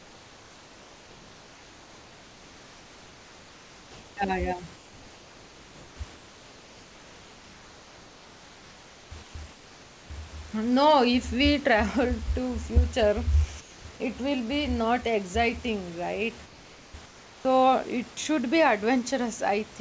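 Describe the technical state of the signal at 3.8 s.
At 3.8 s the sender has likely stopped transmitting during a pause, and the receiver is filling the gap from 0 to 4.17 s with comfort noise in place of the background. The real room detail gives way to a steady, featureless hiss about 3 dB quieter.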